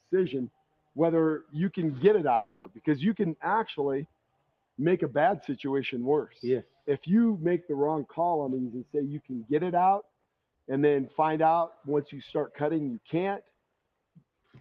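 Right from the start there's a noise suppressor applied to music or sounds, a speech-tuned suppressor left running on material it wasn't designed for. It keeps misreading sustained parts and ambience as noise, so the level breathes up and down by about 5 dB across the whole clip. Onsets survive reasonably well, but anything held or decaying gets pulled back, giving a pumping, thinned-out feel.

On top of that steady wobble there are distinct moments of sound cut by the noise suppressor. Here the processor decided a passage was noise and clamped it much harder than its surroundings. The first runs from 0.5 to 0.97 s and dips by about 19 dB, so the sound sags.

Between 2.35 and 2.73 s the flow of audio breaks. For about 300 ms we get a fading, buzzy continuation of whatever came just before, and when real sound resumes, roughly 300 ms of material is simply gone and the picture jumps forward. 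That pattern points to a long network dropout as the likely cause, with the receiver's concealment stretching the last sound to fill the gap.

The suppressor cuts then keep coming. There's one at 4.06 to 4.78 s (about 19 dB deep), another at 6.64 to 6.87 s (about 15 dB), then 10.03 to 10.27 s (about 18 dB) and 13.42 to 13.64 s (about 18 dB). A final one starts at 14.45 s, runs to the end, and dips about 14 dB. Each time, sustained or fading sound drops away while sharper hits poke through.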